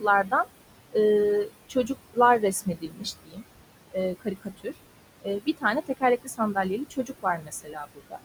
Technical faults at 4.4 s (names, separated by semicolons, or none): noise suppressor artifacts; speech cut by the noise suppressor